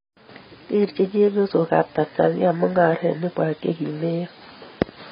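From start to finish the speech sounds dull and smeared, with nothing above 5.5 kHz and a warbling, fizzy texture on sustained sounds and sibilants. The likely cause is heavy AAC compression, AAC-LC at a very low bitrate, fitting about 16 kbps.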